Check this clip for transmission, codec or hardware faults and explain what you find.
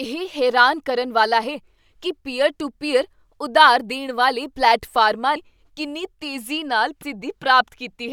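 Two codec faults are present, both the same kind. At 5.36 s, after "ਵਾਲੇ ਪਲੇਟਫਾਰਮਾਂ", and at 7.02 s, after "ਕਿੰਨੀ ਤੇਜ਼ੀ ਨਾਲ", the speech jumps forward, losing roughly 150 ms each time. These are compressed frames skipped: whole frames were dropped before playback, and the size of each jump fits 32 ms frames.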